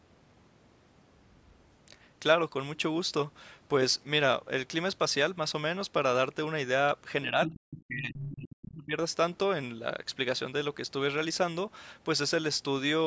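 Speech recorded through a call's microphone processing, with nothing above 8 kHz, has two faults. From 7.24 to 8.95 s the talker's level sinks and breaks up. At its worst it drops by roughly 40 dB, and about one and a half seconds of that stretch is affected. This is speech suppressed in double talk. Likely both sides spoke at once, and the echo canceller could not tell the local talker from the loudspeaker echo, so it turned everything down. Inside that same stretch, the other side's voice leaks through twice, from 7.42 to 7.6 s and from 8.16 to 8.33 s. Each scrap sits roughly 10 dB below the talker's speech. The brief bursts sound like a second voice under the main one. The likely cause is loudspeaker playback reaching the microphone, with the echo canceller leaving part of it behind.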